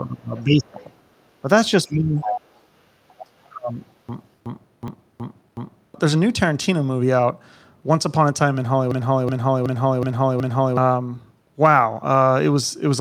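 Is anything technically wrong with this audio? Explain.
Yes, there are four kinds of fault here.

Speech suppressed in double talk occurs from 0.0 to 0.78 s, 1.87 to 2.21 s and 3.24 to 3.8 s. The speech dips by roughly 20, 15 and 35 dB. The likely cause is an echo canceller that cannot separate the talker from the far side, so it ducks both.

The other side's voice leaking through is heard at 0.36 to 0.43 s, 0.67 to 0.84 s, 2.2 to 2.63 s and 3.08 to 3.26 s. It sits roughly 25, 30, 5 and 20 dB below the speech. It is likely residual loudspeaker echo the canceller missed. It is a second voice, not a repeat of the talker's own sound.

A system hang loop runs from 4.09 to 5.94 s and again from 8.91 to 10.77 s. Each time a 0.37 s slice repeats exactly five times, at about 2.7 Hz, which fits a 16384-sample ring buffer cycling while the system stalls. About two seconds of new audio is lost each time. 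It is a skipping-record repeat of identical material, not random glitching.

A dropped buffer (overrun) occurs at 4.88 s, inside the first loop. Roughly 3 ms is likely lost to samples being overwritten before they were read. It is a jump in the sound, with no silence in the gap and no repetition.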